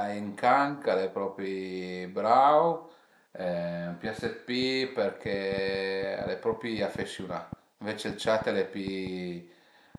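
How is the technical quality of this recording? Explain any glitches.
The recording is marred by one fault, a train of clicks running through the second half of the speech. From 4.05 s to 9.96 s, around thirty sharp clicks arrive at about 4.2 per second, unevenly spaced, peaking somewhat above the speech and audible in pauses too. The likely cause is interference or a faulty connection or power supply injecting pulses. On a waveform they show as narrow spikes, and on a spectrogram as thin vertical broadband lines.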